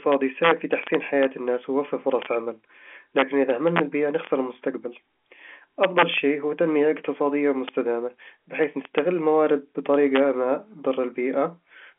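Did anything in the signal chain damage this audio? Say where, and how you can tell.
Yes. The damage is integer overflow in a fixed-point gain or sample-format stage. Loud speech peaks crack violently at 0.12–1.25, 2.22–2.26, 3.18–3.79, 4.25–4.27, 5.83–6.18, 7.68, 8.64–8.99 and 9.94–10.20 s. The peaks ran over full scale by about 0 to 4 dB, worst near 5.83 s. Instead of limiting, the samples wrapped to the opposite sign. That makes sharp snaps far harsher than clipping, heard through the telephone-band G.711 coding.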